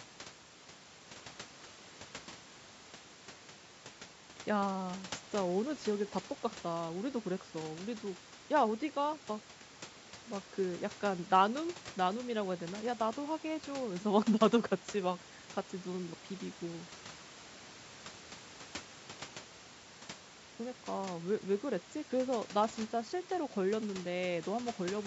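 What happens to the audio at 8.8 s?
Nothing goes wrong at 8.8 s: the speech carries on intact through that moment, with only the usual call microphone processing shaping it, which trims the lowest bass and leaves nothing above 8 kHz.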